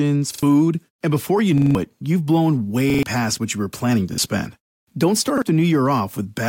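Repeated buffer stutters at 0.34, 1.58, 2.90, 4.14 and 5.38 s. Starved of new audio, the device replays the same 43 ms chunk one to four extra times, consistent with a 2048-sample buffer. Each repeat has a hard join, an identical stutter rather than a silent gap.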